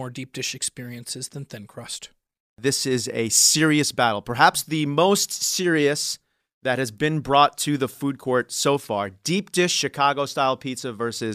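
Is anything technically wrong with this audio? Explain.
No, nothing technically wrong can be heard here.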